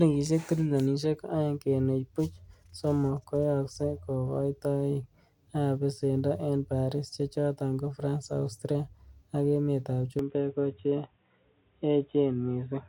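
An input switch to a poorer device is the likely cause of the change at 10.19 s. The speech abruptly loses everything above 3.8 kHz and turns dull and boxy until the end, with no gap at the switch, similar loudness, and faint new background noise.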